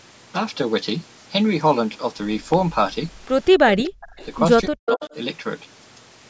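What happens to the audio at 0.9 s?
Nothing goes wrong at 0.9 s; the speech there comes through intact, with only the normal low-bass trimming of the call's microphone processing.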